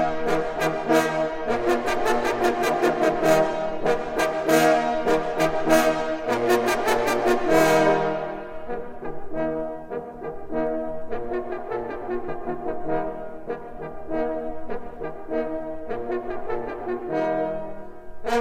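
No technical faults can be heard in this audio.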